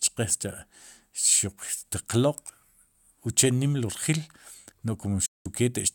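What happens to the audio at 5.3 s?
A digital broadcast dropout cuts the sound from 5.26 s to 5.46 s. The receiver stopped getting good frames and muted its output until valid ones arrived again. The sound fades to silence over about 8 ms rather than clicking off. About 192 ms of programme is missing, which fits roughly six lost frames. It is not paused or stretched; that material is simply gone. The speech then resumes mid-stream at 5.46 s.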